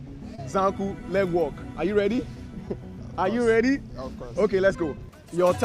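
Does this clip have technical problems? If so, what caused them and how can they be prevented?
Yes. Short concealed packet loss occurs at 0.35–0.40 s and 2.16–2.20 s: each time about 20 ms of audio arrived too late, and the receiver extended the preceding sound before blending back. On a spectrogram, harmonics or noise smear flatly across the gap; the waveform shows an unnaturally repetitive stretch. A larger jitter buffer, forward error correction or a steadier network path would prevent it.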